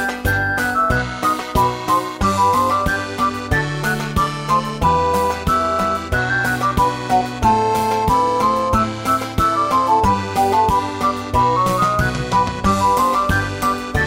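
From start to finish, the sound carries overlap-add ripple. It was split into windowed frames and rejoined with an overlap that fails to sum to a steady gain. The level dips by about 6 dB once per frame, around 200 times a second. This gives a metallic buzz with extra tones around each note.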